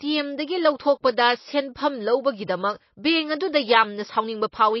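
Likely MP3 compression at a starved bitrate, around 24 kbps, runs throughout: treble stops at 5.8 kHz, and the speech sounds plainly watery and swirly.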